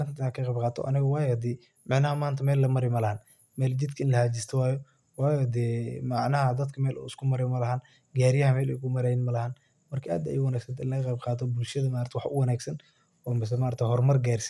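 No technical faults can be heard anywhere in the recording.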